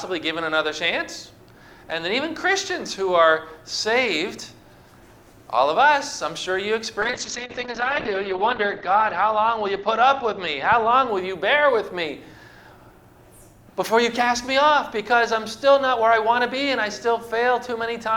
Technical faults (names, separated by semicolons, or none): call bitrate drop